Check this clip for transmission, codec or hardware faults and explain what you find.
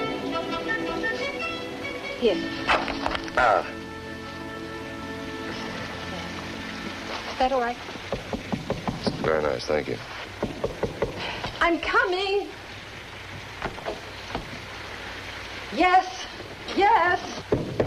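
No faults detected.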